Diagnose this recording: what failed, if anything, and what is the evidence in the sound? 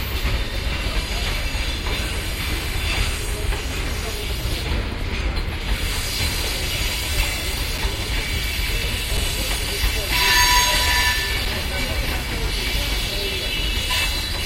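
Damaged data in a compressed stream, at the codec or storage stage: brief glitches at 6.18 s and 8.83 s. Corrupted frames make the decoder lose sync and hunt for the next header, so the artefact is a brief glitch, not the silent flat spot of a dropout.

Underrun with held sample, in the driver or buffer stage: at 7.78 s, 9.17 s and 11.45 s the waveform freezes flat for 5.8 ms, which fits a 256-sample buffer running dry. Playback resumes where it stopped, so there is only a soft edge and no harsh click, unlike corruption's glitches.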